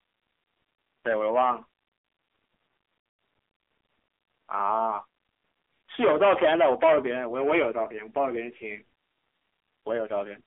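Throughout, the speech sounds thin, buzzy and synthetic, with nothing above 3.5 kHz and little below 300 Hz. This is the AMR narrowband mobile codec, heavily damaged: its vocal-tract model, starved at what sounds like about 6.7 kbps, rebuilds the voice coarsely.

From 1.07 to 1.53 s a crackly edge appears on the loudest moments, and from 5.94 to 8.29 s this becomes a harsh fuzz. This is hard clipping: peaks overdriven by about 7 dB, then about 14 dB, are cut flat, adding high harmonics.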